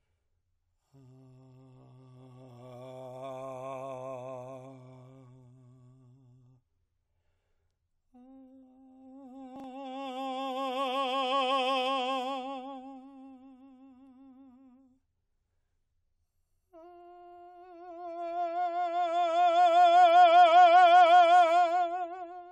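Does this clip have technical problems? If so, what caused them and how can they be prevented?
Yes. At 9.56 to 9.64 s the music briefly jumbles because of chunks out of order. One 40 ms block arrived late and played one chunk after its proper place, so two pieces swap and three hard seams appear. Unlike a dropout, nothing is missing and no gap or silence is heard; the material is all there in the wrong sequence. Reorder buffered chunks by sequence number or timestamp before playback.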